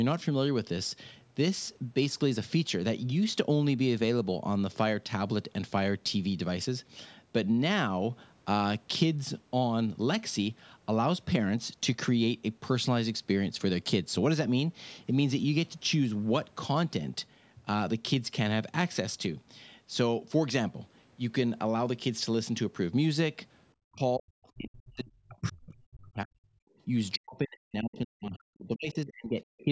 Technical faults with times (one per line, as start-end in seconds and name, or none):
23.91-26.54 speech suppressed in double talk
27.16-29.70 speech suppressed in double talk